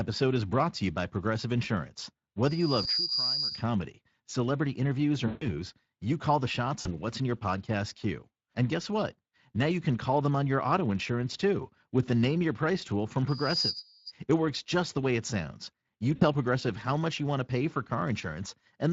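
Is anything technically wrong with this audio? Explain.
Yes. Three kinds of fault can be heard.

Speex codec damage runs through all of the speech. This CELP coder leaves too few bits for the excitation, so the speech turns grainy and hoarse, with a noisy, synthetic edge. The damage is plainly audible and fits a bitrate of around 20 kbps.

Loudspeaker feedback squeal occurs from 2.44 to 3.63 s and again from 13.28 to 14.12 s. The microphone picks up its own loudspeaker, and at 4.9 kHz the loop gain exceeds one. Each time, a single high tone swells over about half a second to roughly 5 dB above the speech.

VoIP packet loss concealed by the speech codec occurs at 2.83 s (inside the first squeal), 5.27 to 5.50 s, 6.81 to 6.95 s and 16.15 to 16.24 s. The decoder fills each gap by extrapolating from its last pitch and filter state while lowering the gain. The longest gap, about 140 ms, is stretched into a buzzy tone or coloured noise that fades.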